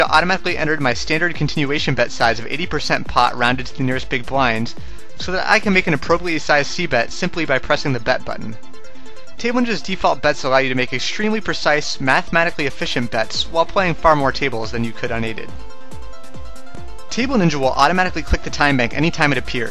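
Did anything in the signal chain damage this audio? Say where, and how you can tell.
No, nothing in the signal chain can be heard damaging this audio. No stage leaves an audible mark on it.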